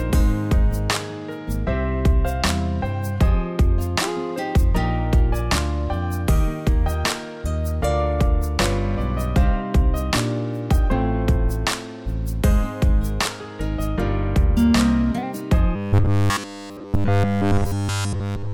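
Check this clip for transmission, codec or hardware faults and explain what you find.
One fault appears, at the end. From 15.76 to 18.54 s there is robotic sound from repeated short buffers, likely from audio arriving too seldom: essentially every gap is filled by looping a 10 ms fragment, imposing a fixed 100 Hz pitch that turns the sound into a rigid metallic buzz.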